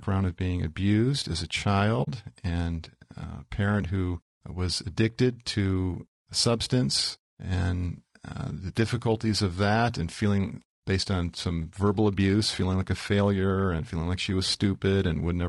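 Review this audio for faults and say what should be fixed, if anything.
Throughout the recording the speech sounds rough and grainy, with a hiss-like texture filling the gaps between voice harmonics and a top band that sounds thin and somewhat synthetic. The likely cause is low-delay AAC compression of the AAC-ELD kind used for video calls. Its short frames resolve pitch harmonics poorly, so at a low rate the coder spends too few bits on the harmonic structure. The damage is plainly audible and fits a bitrate of around 32 kbps. To prevent it, raise the call bitrate or use a codec mode with longer frames when latency allows.

At 2.03 to 2.08 s, between "being abused as a" and "and a parent who", the audio fades out to silence and back in over about 40 ms. This is AAC frame loss with muting. The decoder received nothing for that span, which fits two lost frames, and it zeroed their spectrum. 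The overlapping windows smooth the edges, so the gap is a soft hole. To prevent it, improve network delivery, for example with forward error correction or redundancy, or enable decoder-side concealment.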